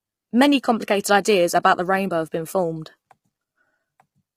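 From start to end, the speech sounds rough and grainy. Noise fills the gaps between the harmonics, and the top band sounds dulled and partly synthetic. The damage is heavy. The likely cause is low-delay AAC compression, the AAC-ELD kind used on video calls. Its short frames split pitch harmonics poorly and use up more bits. The roughness points to a low rate, around 24 kbps.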